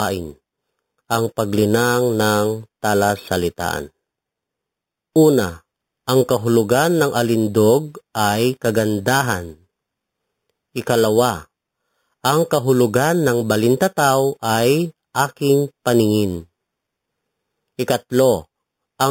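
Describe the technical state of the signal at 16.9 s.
Imaging from sample-and-hold upsampling is present at 16.9 s and throughout the clip. The images suggest an 8 kHz source raised to 48 kHz by repeating samples without smoothing. The result is a metallic fizz from 4 to 8 kHz, about 16 dB below the speech.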